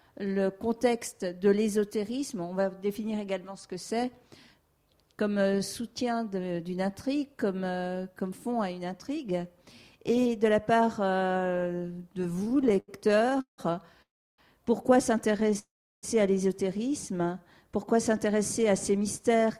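Repeated stalls (stutter) run from 12.33 to 13.60 s: packets arrived late, the jitter buffer kept draining, and 24 gaps, the longest 172 ms, were filled by stretching the last sound, so about 37% of that span drags and halts. Call audio freezes follow at 14.02 to 14.40 s and 15.59 to 16.05 s. Each time the last sound is continued briefly, then fades to silence for about 330 ms and 350 ms respectively before resuming where it stopped, likely because packets were held up in transit. Between them, from 15.32 to 15.57 s, a shorter stutter breaks the sound with 7 small gaps, none longer than 10 ms. A jitter buffer speed-up runs from 18.67 to 19.43 s: after the backlog built up, the receiver cut around 70 ms in pitch-period slices, so the audio plays at 107% speed with unchanged pitch and sounds hurried.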